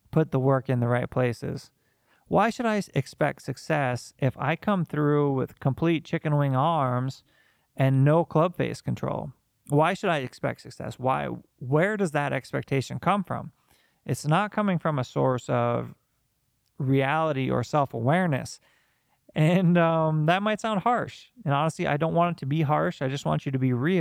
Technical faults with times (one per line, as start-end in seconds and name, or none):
none